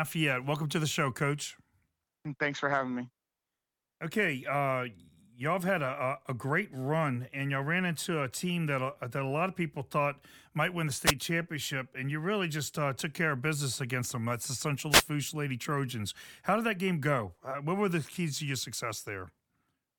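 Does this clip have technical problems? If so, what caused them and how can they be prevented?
Yes, two wireless microphone noise hits, short static bursts at 11.05–11.12 s and 14.90–15.04 s, where the FM radio signal faded as reflections cancelled. Use diversity receivers, keep antennas in clear line of sight, and pick a cleaner frequency.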